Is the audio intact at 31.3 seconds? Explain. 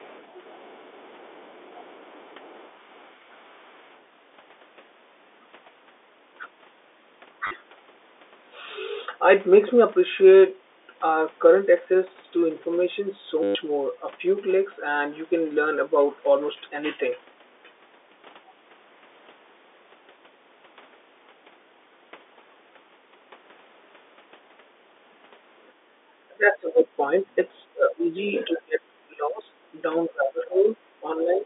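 No. At 31.3 s the speech sits inside a stretch of speech suppressed in double talk, running from 30.07 s to the end at 31.45 s. The speech level is pulled down in bursts, the deepest dips falling roughly 20 dB, for about a second in total. This is likely an echo canceller that heard both ends talking at once, could not separate the far-end echo from the near talker, and attenuated both.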